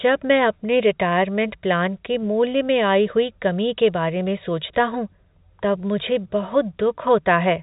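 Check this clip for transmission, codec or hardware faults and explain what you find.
No faults found in this speech clip.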